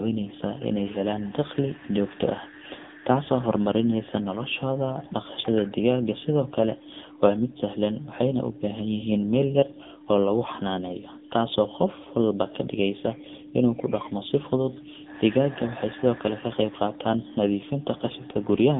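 From start to finish the speech runs through an AMR narrowband mobile codec, squeezed into a phone line of roughly 150 Hz to 3.7 kHz, with nothing above 3.8 kHz. The heavy buzzy, synthetic edge comes from the vocal-tract model being fed too few pulses per frame, which fits one of the low modes near 6.7 kbps. A plain low-pass filter would dull the top without that robotic, frame-by-frame graininess.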